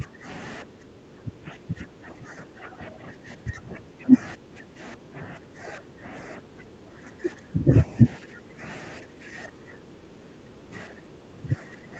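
From 0.0 to 0.26 s, 0.63 to 4.13 s, 4.36 to 6.07 s, 6.38 to 7.71 s, 8.18 to 8.61 s and 8.98 to 11.99 s the speech dips by roughly 10 to 15 dB, likely speech suppressed in double talk as the echo canceller attenuates the near-end talker.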